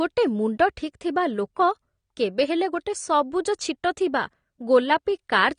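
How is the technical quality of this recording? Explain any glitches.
Quality is compromised by plainly audible codec damage across the whole speech recording. Throughout, AAC compression, likely AAC-LC at around 32 kbps, strips everything above 9.7 kHz, sounding dull and smeared. A spectrogram shows a hard, flat ceiling at that frequency.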